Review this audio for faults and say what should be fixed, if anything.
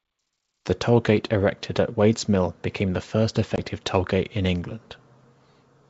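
Packet loss on the ADPCM call at 3.56–3.58 s leaves a hard-edged 20 ms silent hole, about one packet. Unlike a plain dropout, the speech returns slightly distorted as the decoder's predictor and step size resynchronise within tens of milliseconds. Adding packet loss concealment with decoder state reset on the G.722 link, plus jitter buffering or redundancy, would prevent it.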